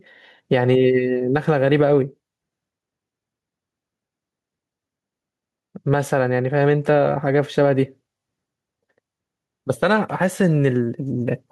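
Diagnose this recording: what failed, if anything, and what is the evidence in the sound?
Gain pumping runs through the whole speech clip: the gain ducks by around 5 dB under every loud syllable and recovers in each pause, leaving the level squashed. The likely cause is input gain set far too high, with a fast limiter or compressor in the call processing stage clamping each peak.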